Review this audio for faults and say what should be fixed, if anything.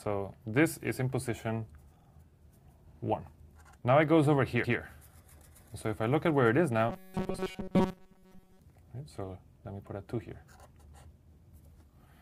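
At 1.98 to 2.07 s there is a stutter: a 46 ms slice of sound plays two extra times, adding about 93 ms. These are repeated frames: the same compressed frames were written or sent again, which fits two frames of about 23 ms each. To prevent this, deduplicate frames by sequence number or timestamp before decoding.

At 4.63 to 4.77 s a longer 139 ms stretch plays once more, heard as a jump back, adding 139 ms. This is again repeated frames, consistent with roughly six 23 ms frames being duplicated in the stream or file. The same sequence-number check on the write or transport path would prevent it.

From 6.89 to 8.59 s the sound turns into a rigid, metallic buzz pitched at 188 Hz that only loosely tracks the underlying audio. This is robotic sound from repeated short buffers, likely caused by input arriving too seldom while the last 5.3 ms chunk loops and most of the real audio is dropped. 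To prevent it, enlarge the buffer or fix the late delivery so the software never has to repeat its last chunk.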